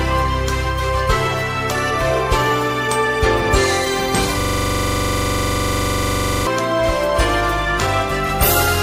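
A system hang loop runs from 4.41 to 6.47 s. A 42.67 ms slice of audio repeats exactly, about 48 times, at 23.4 Hz. The computer or driver stalled while the hardware kept replaying one ring buffer, which fits a 2048-sample buffer.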